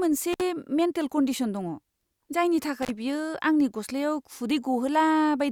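At 0.33 s the speech drops out with an intermittent contact. A loose plug or cable briefly opens the signal path. The sound gaps for about 58 ms, crackling at each edge. The same fault returns at 2.82 s, opening for about 36 ms.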